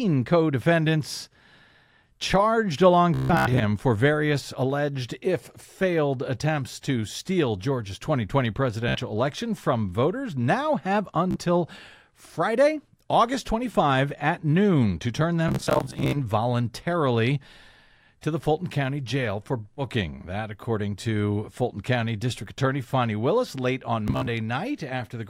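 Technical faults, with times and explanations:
3.14–3.63 s, 8.89–8.99 s, 11.31–11.39 s, 15.49–16.17 s, 19.74–19.83 s and 24.08–24.28 s, Bluetooth stutter: late or lost packets made the receiver replay its last short slice, about 15 to 25 ms, until data returned. The longest bursts (289.5 ms before "for various alleged if", 396.2 ms at 15.49 s) become a machine-gun buzz, and speech then resumes further on, as if it had kept playing.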